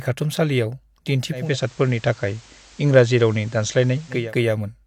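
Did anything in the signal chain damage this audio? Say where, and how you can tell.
Yes. From 1.3 s to 4.35 s the speech gains a faint hiss well beneath it and a level shift of about 1 dB, each eased over 280 ms. This is digital radio blending to analogue: the tuner lost the digital stream and crossfaded to the station's FM broadcast, then back.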